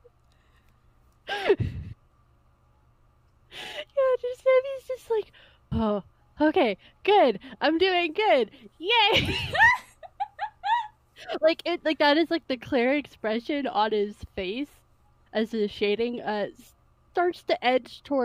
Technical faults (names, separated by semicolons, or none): none